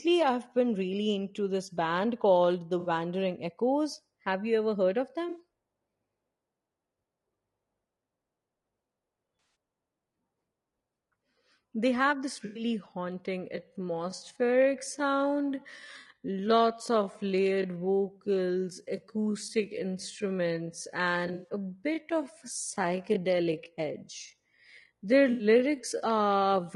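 Across the whole speech clip the voice is rough and grainy, with a hiss filling the gaps between harmonics and a top band that sounds thin and synthetic. The damage is plainly audible and is likely the work of low-delay AAC compression. The AAC-ELD codec used in video calls codes very short frames, so at a low bitrate it resolves pitch harmonics poorly. The sound fits a rate around 32 kbps.

At 2.79, 5.29, 9.39 and 12.45 s there are brief smeared, noisy, phasey patches. The first two last about 60 ms, the one at 9.39 s about 160 ms and the one at 12.45 s about 100 ms. This is AAC frame loss with concealment: whole frames went missing, and the decoder patched each gap by reusing the last good spectrum with scrambled or interpolated detail.

From 13.52 s to the end, the pace suddenly drops to about 0.62 times normal speed while the pitch stays put. This time-stretched section was likely produced by software that lengthened the audio by repeating short pieces.

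Inside the stretched part, the same concealment patches return at 14.15 and 15.99 s, about 60 ms each. At 21.27 s a cluster of losses is scattered over about 160 ms, with the longest run about a tenth of a second. The last patch comes at 25.31 s and lasts about 80 ms.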